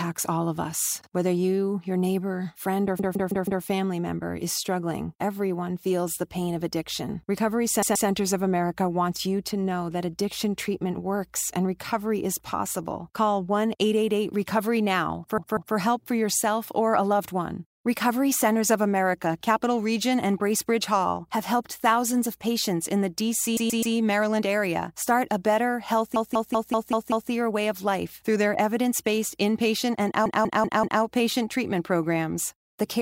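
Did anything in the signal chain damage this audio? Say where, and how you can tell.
Yes, repeated frames at the codec or storage stage: a chunk of about 130 to 190 ms replays as a stutter at 2.99–3.64, 7.82–8.08, 15.38–15.76, 23.57–23.95, 26.16–27.31 and 30.26–31.02 s. The waveform shows identical blocks tiled back to back, and the spectrogram shows copied patterns.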